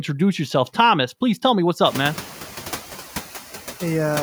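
From start to finish, the background noise dips slightly in the gaps between phrases and swells back up underneath the speech, so the noise floor seems to breathe along with the talker. These are noise suppressor artifacts. The suppressor estimates which frequency bands hold steady noise and lowers them frame by frame, here by about 4 dB. After the room noise rises by about 22 dB at roughly 2 s, sitting about 16 dB below the speech, the pumping becomes easier to hear.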